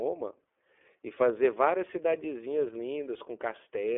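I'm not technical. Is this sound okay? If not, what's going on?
No. The whole clip passed through the iLBC codec, a compressor built for internet phone calls. It removes everything above about 3.7 kHz, so the speech sounds thin and boxy. It rebuilds sound in 30 ms chunks, leaving it rough and slightly robotic throughout.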